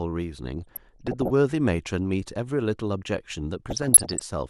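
From 0.59 to 1.30 s and again from 3.66 to 4.25 s, the speech carries DAB burbling. Bit errors slipping past error correction corrupt MP2 sub-band samples and scale factors, so single bands leap in level for up to a frame. This produces short blips of noise in single sub-bands, seen as scattered brief bright blocks on a spectrogram.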